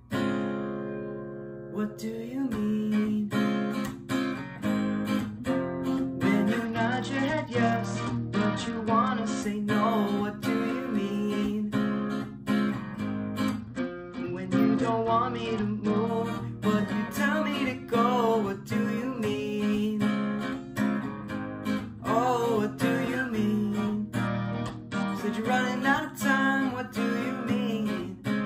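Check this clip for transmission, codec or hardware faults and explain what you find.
A Bluetooth SBC bit pool drop occurs three times: 6.65 to 9.43 s, 13.60 to 16.08 s and 24.27 to 25.08 s. Link congestion made the encoder cut its bits, consistent with bit pool 31 falling to 10, near 77 kbps. The treble dulls and gritty noise rises until recovery.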